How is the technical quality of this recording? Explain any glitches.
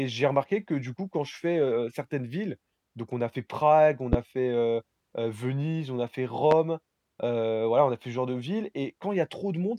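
The recording has two loud pops. The first, at 4.13 to 4.17 s, comes just before "fait heu heu" and peaks about 20 dB above the speech. The second, at 6.51 to 6.55 s, follows "on a fait" at about 15 dB. Each is a single sharp thump over continuing speech, likely from a brief electrical pulse such as a switch, static discharge or driver glitch that was shaped by downstream circuitry.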